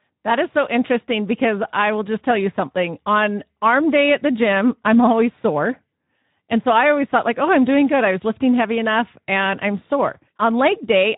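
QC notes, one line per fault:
Throughout, Speex codec: the speech comes out hoarse and grainy, which fits Speex running at about 11 kbps with too few bits for the excitation.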